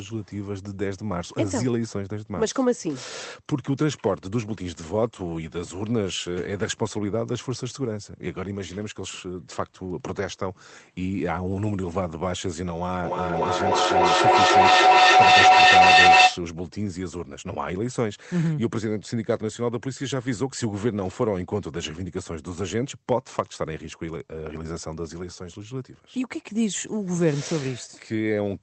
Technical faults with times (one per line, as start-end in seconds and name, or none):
13.04-16.48 feedback howl